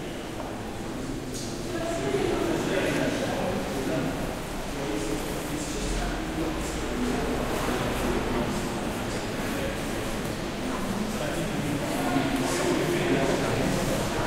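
Nothing goes wrong here at all; the sound just runs along without a single fault turning up anywhere.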